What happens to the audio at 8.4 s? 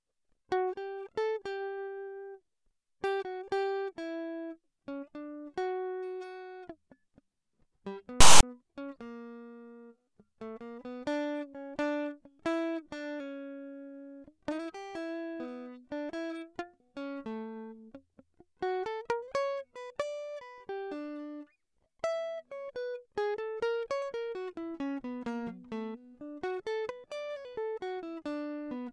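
At that point the player is decoding the file's tag block as if it were audio, a fault known as file tags played as audio. Between 8.21 and 8.43 s, text metadata and its zero padding are fed out as samples. The text bytes turn into a loud, harsh rasp pushed off to one side, and the padding drops to dead silence. The burst cuts in and out abruptly over the music, with hard edges at both ends.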